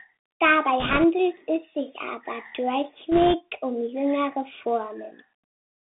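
Throughout, the speech carries the Bluetooth CVSD headset codec: the band runs from about 150 Hz to 3.6 kHz, consistent with a 64 kbit/s one-bit delta stream whose adaptive step lags loud high content, so sibilants turn scratchy over a grainy hiss.

Bit errors on a Bluetooth voice link appear from 0.80 to 1.04 s, just before "es sich", and from 3.12 to 3.35 s, just before "um jüngere". At an error rate of a few percent, flipped bits each nudge the waveform slightly and decay, giving a rushing crackle rather than clicks.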